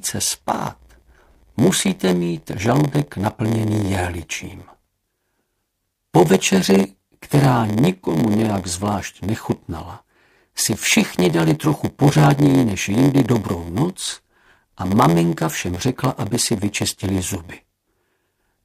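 From start to finish, a block size mismatch (padded) is heard. Each block is written short, and the remainder is filled with zeros. That leaves a tiny gap in every block. The result is a steady buzz at 86.1 Hz, which fits a 512-sample block. The sound also runs slow, at 0.938 times normal speed, with pitch roughly unchanged.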